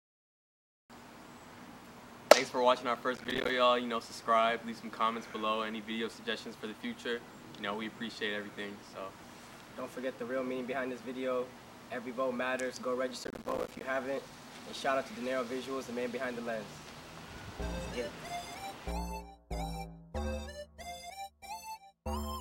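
The processor fell behind twice, at 3.16 to 3.50 s and again at 13.24 to 13.81 s, repeatedly failing to deliver short audio buffers on time. This is processor overload crackle. Each missed deadline drops in a tiny slice of silence with hard edges, and the rapid pattern suggests buffers of around 5 ms. Dozens of these gaps in quick succession turn into a gritty, tearing crackle over the sound, the second burst longer, and both stop once the load eases.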